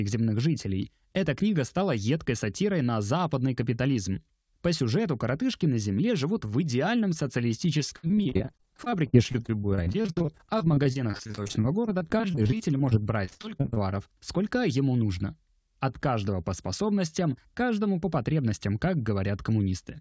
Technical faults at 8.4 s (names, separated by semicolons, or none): repeated packet loss (robotic sound)